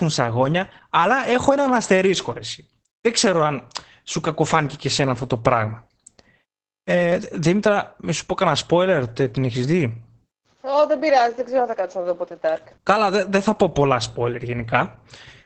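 A speech clip with heavy Opus voice compression throughout: SILK's linear-prediction coding leaves the voice muffled, hoarse and faintly robotic, pointing to a bitrate near 10 kbps. On a spectrogram, energy stops abruptly at 8.6 kHz, and the harmonics below look smeared and blotchy.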